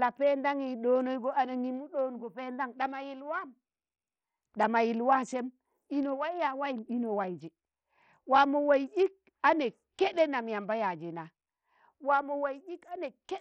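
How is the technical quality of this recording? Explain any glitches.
The technical quality is poor, with heavy codec damage throughout. For the whole recording, the speech carries gritty noise, aliasing and flickering treble, consistent with heavy compression at around 64 kbps, likely from Bluetooth SBC compression. Its coarse sub-band quantisation starves the upper bands of bits.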